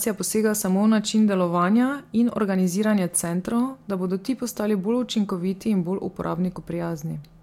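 Nothing in this bit of speech stands out as a technical fault, so there's nothing to flag here.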